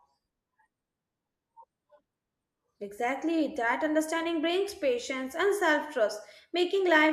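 No technical faults can be heard anywhere in the recording. Nothing in the speech calls for a timestamp or an explanation.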